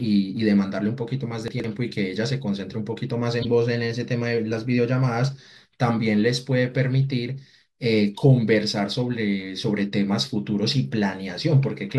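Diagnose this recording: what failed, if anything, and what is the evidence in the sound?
Chunks out of order, at the buffer or packet-reassembly stage, between 1.48 and 1.64 s. In that 160 ms window the speech jumbles briefly. It fits 40 ms chunks, with one chunk arriving three chunks late and playing after the material that should follow it. No audio is missing, but the sequence is scrambled. On the waveform, the three hard joins show as abrupt discontinuities. On the spectrogram, the formant tracks jump backward and forward instead of flowing.

Corrupt frame decoded, at the codec stage, at 3.41 to 3.45 s and again at 11.63 s. Each is a short chirp or burst of noise. The first spans about two frames. The second is a brief blip around a few frames' worth of damage. The decoder accepted bit-damaged frames and rebuilt energy at the wrong frequencies from misread gains and codes. A spectrogram shows isolated blocks or streaks of energy unrelated to the surrounding harmonics. 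The waveform shows a sudden foreign spike.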